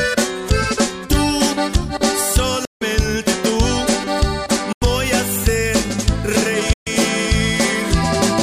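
Bluetooth dropouts at 2.65–2.82 s, 4.72–4.82 s and 6.73–6.87 s cut the audio to silence for about 160, 87 and 131 ms, and it resumes further along, as though playback ran on. Packets likely arrived too late at the headphones and were discarded.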